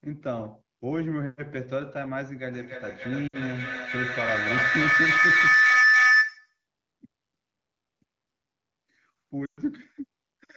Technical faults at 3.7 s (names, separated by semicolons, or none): feedback howl